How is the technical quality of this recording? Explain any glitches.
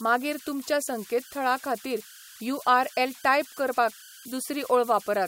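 The recording has one persistent problem: converter idle tones running through the whole clip. The converter evidently had no dither, so on quiet input it locked into repeating bit patterns, producing a whistle around 1.5 kHz in the pauses and grainy noise under softer speech, sitting about 21 dB below the speech level.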